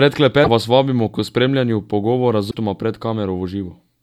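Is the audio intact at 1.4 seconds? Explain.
Yes, the audio is intact at 1.4 seconds, with no dropout, click, distortion or other fault at that point.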